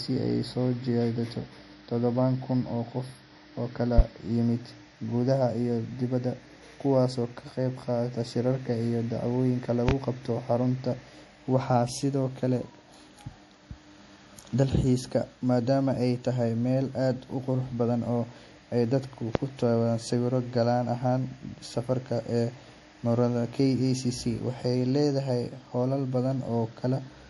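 MP3 compression runs through the whole speech recording: nothing survives above 11.5 kHz and the sound turns watery, likely from a low-bitrate encode consistent with around 48 kbps. Loud pops, each about 40 ms, strike at 3.98 s, 9.89 s just before "qabto xarunta", and 19.35 s, roughly 20 dB above the speech, likely voltage spikes from a switch, plug, static or driver glitch.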